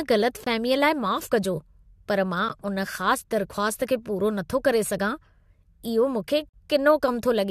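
Speech with a gap between stream segments: the timestamps of adjacent streamed segments, which fits 2-second segments, leave small holes that the player fills with silence. The result is hard-edged dropouts at 0.44–0.47 s, at 2.49 s, and at 6.49–6.54 s. They last about 22 ms, 13 ms and 43 ms. The audio simply pauses and resumes, with nothing missing on either side.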